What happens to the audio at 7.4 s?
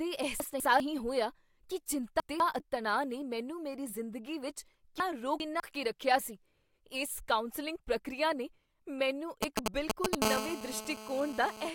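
Nothing goes wrong at 7.4 s; the speech carries on intact through that moment with no dropout, click, glitch or other fault.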